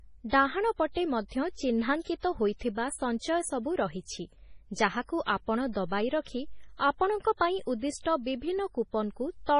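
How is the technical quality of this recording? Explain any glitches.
The quality is poor, with heavy MP3 compression damage across the whole speech recording. Nothing remains above 10.6 kHz. Sibilants swirl and chirp as weak frequency lines flicker, which fits a likely low bitrate near 24 kbps.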